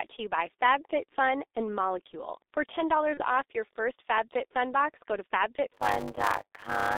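Throughout, the G.723.1 codec coding at what sounds like its 6.3 kbit/s rate keeps only 300 Hz to 3.7 kHz, leaving the speech muffled, hoarse and smeared at consonants.

From 3.14 to 3.22 s, VoIP packet loss concealed by the speech codec covers about 30 ms, fitting one lost frame. The decoder stretches its last sound into a fading buzzy tone or coloured noise, with weakness lingering into "off your first".

From 5.73 s to the end, a block size mismatch (padded), consistent with 256-sample writes into larger reads, zero-fills each block after "box go to". This puts a 100 Hz buzz over the audio and slows it to about 0.53 times speed with timbre unchanged.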